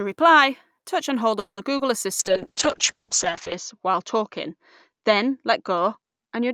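Right after "reply touch and hold", from 1.39 to 1.59 s, a call audio freeze stretches the last sound into a fading buzz that ends in about 70 ms of silence. The likely cause is packets held up in transit until the jitter buffer ran dry. About 180 ms of invented audio is inserted, and everything afterwards arrives 180 ms late with nothing lost. On a spectrogram the final harmonics smear flat and then go dark. The waveform shows a decaying tail before a flat line.

At 1.77 to 1.81 s, a short concealed packet loss replaces about 20 ms of missing audio with an extrapolation of the preceding sound, then crossfades back. It is heard as a tiny smear or wobble. A spectrogram shows a brief blurred patch where fine detail briefly freezes.

From 2.2 s to the end, a call bitrate drop pushes the encoder from 64 kbps down to 6 kbps, where it stays at its lowest for about 1.3 s. The sound turns rough and muffled. 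A spectrogram shows everything above roughly 8 kHz cut off, with coarse, blocky texture below.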